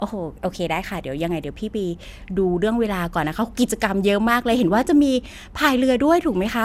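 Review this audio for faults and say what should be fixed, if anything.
Generation loss runs through the whole speech clip. The sound is swirly and hollow, consonant attacks are smeared, and nothing remains above 16 kHz. This is likely the result of around seven successive lossy passes, consistent with MP2 at 128 kbit/s, each requantising on a shifted frame grid. To prevent it, keep intermediate copies lossless and encode only once, at the final delivery stage.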